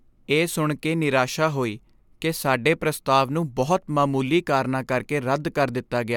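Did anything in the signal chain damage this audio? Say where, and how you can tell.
No, nothing in the signal chain damaged this audio.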